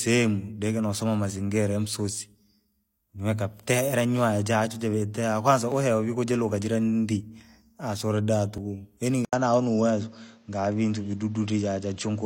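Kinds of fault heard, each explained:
Dropped buffer (overrun): Skips at 5.72 s, just after "nyoya jachwe jivetee kwanza", and at 8.58 s, where the speech jumps forward by a few milliseconds and then about 20 ms, likely samples overwritten before collection. The edges join directly with no silence, unlike a dropout.
Input switched to a poorer device: At 9.25 s the speech breaks for 80 ms, then continues duller, with a narrower band and a new noise floor roughly 40 dB down, likely a change to another input. The level stays about the same, but the new noise sets it apart from a simple filter.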